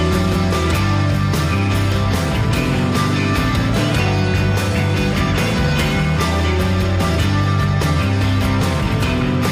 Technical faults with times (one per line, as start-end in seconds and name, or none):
none